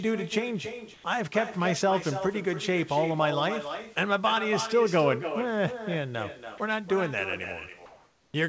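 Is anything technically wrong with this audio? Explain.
Yes. Echo with no canceller runs throughout: the far end's loudspeaker feeds its microphone, returning the speech roughly a third of a second later, about 9 dB quieter and thinner.

Comfort noise in place of the background appears at 0.94–1.04 s and 7.86–8.34 s, likely from discontinuous transmission. Synthetic, featureless noise replaces the real background, about 2 dB louder in the later gap.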